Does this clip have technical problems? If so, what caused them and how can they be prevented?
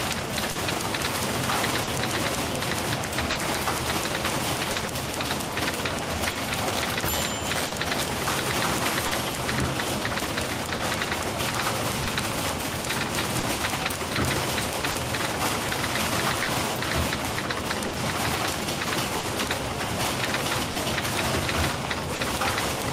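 Yes. Clock drift between sender and receiver runs through the whole clip: the sender's clock is about 3 percent slower than the receiver's, so the jitter buffer keeps draining. The receiver repeatedly stretches or repeats short pieces, giving small timing hiccups at uneven intervals. On a waveform these appear as tiny duplicated cycles. On a spectrogram they appear as faint vertical seams where the texture jumps. Resampling adaptively to track the sender's rate, or locking both ends to a shared clock, prevents this.

Scattered short gaps appear from 0.51 s to 22.22 s. There are about fifteen lost or late packets, the longest around 40 ms, and they add up to roughly 0.7 s, about 3 percent of that span. Each hole was patched by continuing the previous sound, so they come through as brief smears or ticks rather than silence. A spectrogram shows short smeared, overly steady patches with a discontinuity at each edge, and a waveform shows copied segments with abrupt joins. 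A larger jitter buffer, forward error correction and a steadier network connection prevent these.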